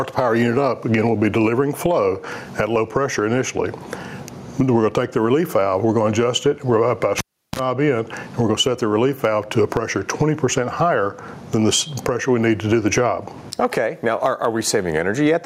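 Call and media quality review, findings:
Gain pumping, throughout: gain ducks around 15 dB under each loud sound; dynamics squashed. Likely input gain far too high, fast limiter/compressor clamping. Waveform: flattened envelope.

Cable pulled and plugged in, 7.18–7.59 s: pop at 7.18 s, near silence for 0.36 s, 39 ms burst of 60 Hz mains buzz on tip-only contact, second pop as signal returns. Live input cable disconnected and reinserted. Waveform: spikes bracketing flat gap. Spectrogram: vertical broadband lines, 60 Hz harmonic stack.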